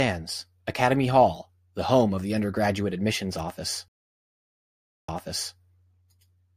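At 3.88 s, right after "the undergraduate admissions office", a stream reconnect cuts the audio to about 1.19 s of flat silence, a blank gap in waveform and spectrogram. A fresh decoder then resumes around 0.49 s earlier, so that stretch repeats before 5.57 s.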